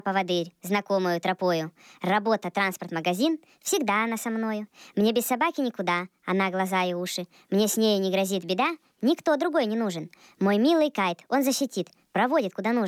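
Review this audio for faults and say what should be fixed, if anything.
The speech runs fast and high throughout: a wrong sample rate. Speed and pitch rise together, about 1.38 times faster and 5.5 semitones higher. That fits audio recorded at 32 kHz being played at 44.1 kHz without conversion. To prevent it, read the file's true rate and resample before playback.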